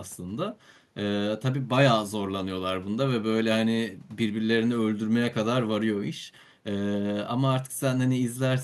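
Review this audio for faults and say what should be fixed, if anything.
No faults; nothing to fix.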